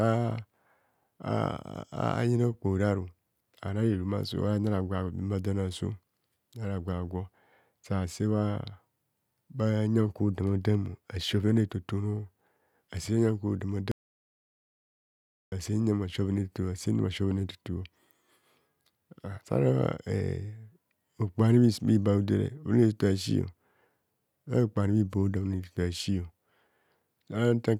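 Speech that cuts out abruptly just after "nyan kwo dama", going to silence from 13.92 s to 15.52 s, with no room tone underneath, before resuming mid-flow. This audio dropout to silence loses about 1.6 s, likely from the input briefly disconnecting or muting while recording continued.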